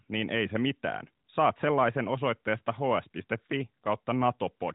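No faults detected in this speech; the narrowband mobile codec path sounds as expected, with the band topping out at 4 kHz and only light coding texture at its 12.2 kbps rate.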